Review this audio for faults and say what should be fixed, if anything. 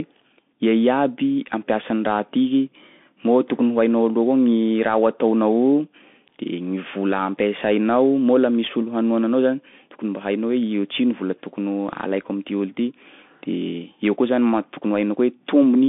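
The whole clip carries Bluetooth CVSD headset codec damage, and it is plainly audible. The speech is confined to 150 Hz to 3.5 kHz. S sounds turn scratchy over a granular hiss, as one-bit step coding, which fits a 64 kbps headset link, fails to track fast loud highs. Record with a wired microphone or a wideband Bluetooth mode instead.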